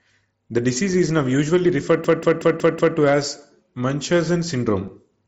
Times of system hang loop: 2.04-2.97

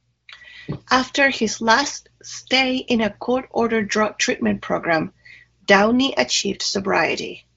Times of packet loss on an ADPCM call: none

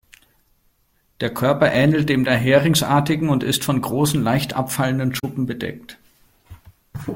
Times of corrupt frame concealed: 5.19-5.24

